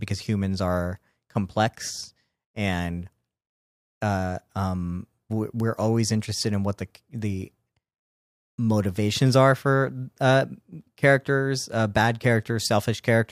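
No technical faults are audible anywhere in the speech recording.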